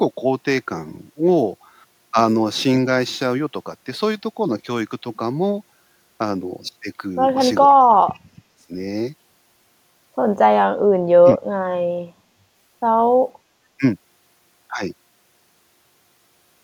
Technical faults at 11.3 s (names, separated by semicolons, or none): speech suppressed in double talk